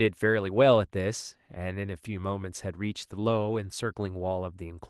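No technical faults can be heard anywhere in this speech recording.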